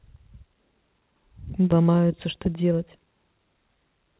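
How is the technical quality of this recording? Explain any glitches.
The recording has two glitches in quick succession. The audio also stops at 4 kHz, which fits the narrowband G.711 A-law codec at 64 kbps used on this call path.

Skip ahead, 1.72 to 1.74 s: A stretch of speech was dropped while later audio was already queued. Playback jumps forward with no gap or fill. About 0.4 s of speech is missing, and the two sides are spliced almost directly.

Jitter buffer speed-up, 1.81 to 2.87 s: The buffer was still holding more audio than its target, so the receiver repeatedly cut out short pitch-period pieces, around a tenth of a second in total. The speech runs at 111% speed at unchanged pitch and sounds hurried.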